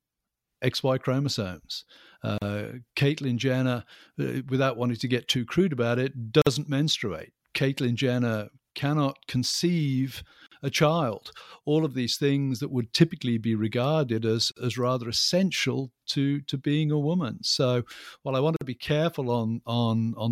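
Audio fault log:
2.38, 6.42, 10.47, 14.52 and 18.56 s: gap at a join of encoded pieces. The speech drops out for about 36 ms at the first join and 49 ms at the rest, right after "too crude about it", between "cannot conceive" and "a child", and after "while I want to". The 4.0 s spacing points to separately encoded segments joined with their start delay and end padding left in. A waveform shows flat silent slots with abrupt, slightly smeared edges; a spectrogram shows thin vertical blank stripes across all frequencies.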